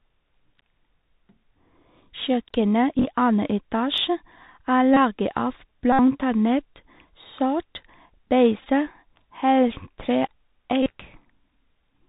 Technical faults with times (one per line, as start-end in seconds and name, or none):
0.00-12.09 Bluetooth CVSD headset codec
2.98-3.05 Bluetooth headset packet repeated
4.94-4.97 Bluetooth headset packet repeated
5.92-6.00 Bluetooth headset packet repeated
8.60-8.67 Bluetooth headset packet repeated
10.83-10.90 Bluetooth headset packet repeated